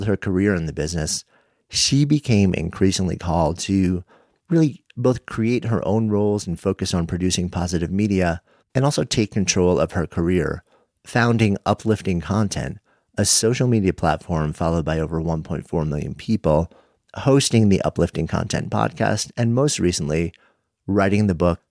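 No technical faults can be heard anywhere in this speech recording.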